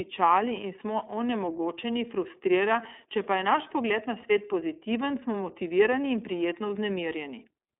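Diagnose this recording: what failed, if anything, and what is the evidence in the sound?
The codec stage failed here: the speech has passed through the iLBC codec for the whole recording. The band is limited to roughly 250 Hz to 3.6 kHz, with nothing above 3.7 kHz, so sibilants and air are gone. Throughout, the speech has a plainly audible rough, slightly synthetic texture. That texture comes from iLBC coding the excitation of each 30 ms frame independently, which fits its 13.33 kbps mode.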